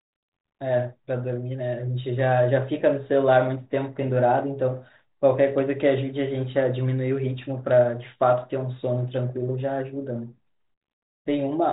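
No technical faults are audible.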